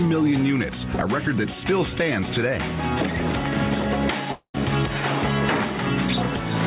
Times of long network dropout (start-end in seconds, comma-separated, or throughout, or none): 4.32-4.56